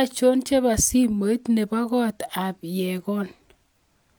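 No technical faults are audible.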